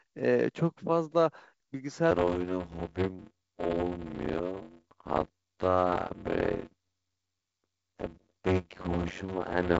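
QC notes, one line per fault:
2.11 s to end, block size mismatch (padded): a 91.9 Hz buzz and 0.533× speed with the timbre kept, which fits 256-sample blocks zero-padded into larger reads.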